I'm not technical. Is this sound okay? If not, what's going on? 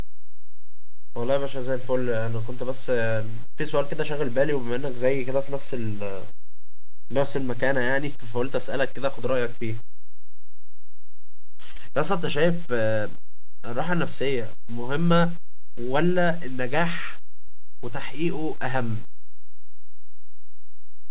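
No, not quite. There are two short hiccups from short concealed packet loss, around 11.72 to 11.77 s and 17.47 to 17.50 s. Small bits of the call arrived too late, so the receiver patched each gap by stretching the sound just before it, which you'd hear as a tiny smear or blip.

There's also a DC offset running through the whole clip: the entire waveform sits off its centre line. You can't hear it, but it wastes some of the loudness room the recording has.

The dull, phone-like tone is just the call system, which carries nothing above about 4 kHz.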